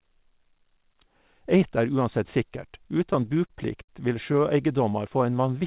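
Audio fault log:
2.97–3.89 s, repeated stalls (stutter): Packets kept reaching the receiver late, so its jitter buffer drained seven times in under a second. Each time, the receiver stretched out the last sound until fresh audio arrived, filling about 136 ms in all, with the longest wait near 60 ms. None of the speech is lost, but about 15% of this stretch is patched-in continuation, so the speech hitches and drags in small jerks, all within the 4 kHz ceiling of the narrowband call path.
4.72–5.60 s, jitter buffer slow-down: With its reserve running low, the jitter buffer repeated single pitch cycles and fragments of pauses over and over to build up a cushion, adding about 79 ms. The speech therefore plays at roughly 92% speed without any change in pitch. Vowels and pauses sound drawn out, and the delivery seems to slow near the end.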